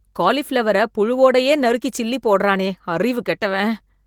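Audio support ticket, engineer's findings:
No faults found in the speech clip. Opus voice compression is active in hybrid mode at about 20 kbps, fullband with content up to about 20.3 kHz, and leaves only light coding texture.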